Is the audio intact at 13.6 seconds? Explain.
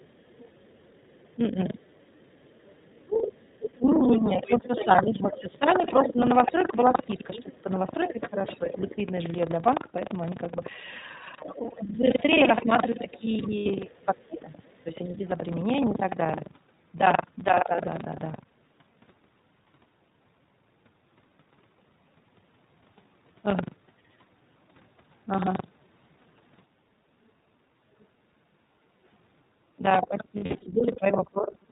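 No. At 13.6 s several faults overlap.

The lost iLBC frames run from 13.58 to 13.69 s. Packets dropped out for about 80 ms, which fits four missing 20 ms frames, and the decoder filled the hole by repeating the last pitch cycle blended with noise. It is heard as a brief held, buzzy vowel. Because each iLBC frame decodes on its own, the voice snaps back straight after.

Buffer tearing runs through the whole clip. The writing program and the playback hardware have drifted, so they cross inside every buffer. That fits a 2048-sample buffer. Roughly a sixth of each period replays audio from about a tenth of a second earlier, with hard joins on both sides. The result is a 23.4 Hz robotic rattle that is present only while there is sound.

The iLBC codec is also present throughout. Speech is squeezed into 20 ms narrowband frames at a rate that points to the 15.2 kbps mode. Nothing above 4 kHz survives, and the voice comes out plainly rough and synthetic.

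The other side's voice leaking through spans 11.47 to 14.83 s. An echo canceller likely failed to remove the far-end loudspeaker from the microphone, so a faint second voice sits around 30 dB below the speech.

Speech suppressed in double talk spans 11.53 to 17.84 s. With both sides talking, the canceller likely pulled the talker down too. This produces dips of up to around 10 dB, adding up to about three seconds in all.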